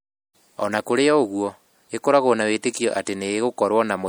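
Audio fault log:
throughout, MP3 compression: the speech has a plainly audible watery, swirly texture as weak frequency lines switch on and off between frames, likely MP3 coding at a rate that fits about 64 kbps. Content still reaches 20.7 kHz, so this is not simple band-limiting.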